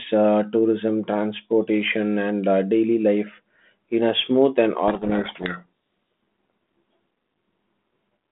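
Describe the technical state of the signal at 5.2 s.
At 5.2 s the signal is inside a codec payload misread running from 4.88 to 5.66 s, just after "in a smooth and". The G.726 decoder is reading each code word with its bits in the wrong order, so valid-looking values land in the wrong places and the speech is buried under harsh, grinding distortion. On a spectrogram the harmonic striations dissolve into dense, rough energy across the telephone band up to about 3.6 kHz. The waveform turns jagged and noise-like.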